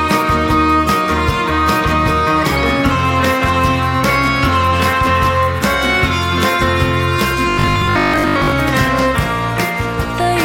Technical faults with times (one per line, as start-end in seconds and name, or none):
7.50-8.58 robotic sound from repeated short buffers